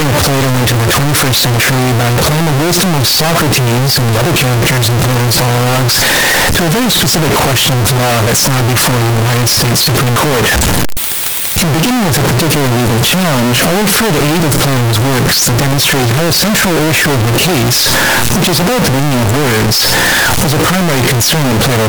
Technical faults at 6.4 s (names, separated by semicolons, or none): signed and unsigned mixed up